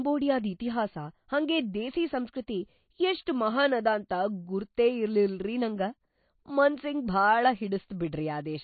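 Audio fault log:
Throughout: MP3 compression damage, plainly audible on this speech. Nothing comes through above 4.5 kHz, so the top end sounds dull, and starved frequency lines flicker in and out, giving that watery swirl. It's likely a heavily squeezed MP3, around 28 kbps.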